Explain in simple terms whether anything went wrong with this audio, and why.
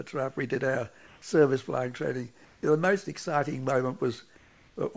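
Three short stretches of background get swapped for a flat, featureless hiss: 1.07 to 1.22 s, 2.45 to 2.63 s, and 4.37 to 4.76 s. That's comfort noise in place of the background. The likely cause is the sender going quiet during pauses and the receiver filling the gaps with made-up noise shaped roughly like the real room. The level barely changes, but the natural texture disappears until the sound resumes. The call codec's top end stops around 8 kHz, which is just how that path sounds.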